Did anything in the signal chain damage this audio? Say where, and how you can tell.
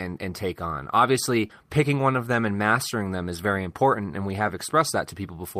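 Yes. At the network stage there is short concealed packet loss from 1.47 to 1.51 s, between "and take on obviously" and "picking one of them". About 20 ms of audio never arrived in time, and the decoder extended the preceding sound to fill it. That is a smear of continued sound rather than a hard gap or click, which is what separates it from a dropout.

At the codec stage there is a lost packet rebuilt from error correction at 1.49 to 1.51 s, overlapping the end of that loss. One 20 ms packet was replaced by the low-bitrate copy carried in the next packet. It plays without a gap but sounds rougher and noisier, unlike concealment, which extrapolates earlier sound rather than decoding a real copy.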